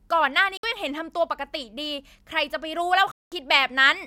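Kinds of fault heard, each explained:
Bluetooth dropout: the speech goes silent for 61 ms at 0.57 s and 203 ms at 3.12 s, then resumes further along, likely from late wireless packets.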